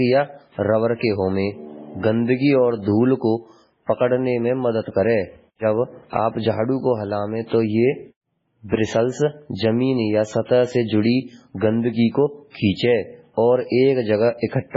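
Speech runs from start to finish with heavy codec damage, most likely MP3 compression at a very low bitrate, around 16 kbps. Nothing survives above about 7.6 kHz, and the remaining sound turns watery and swirly as weak frequency lines drop in and out from frame to frame, with chirpy s sounds and smeared onsets. A plain low-pass filter would dull the top just as cleanly but leave no swirl.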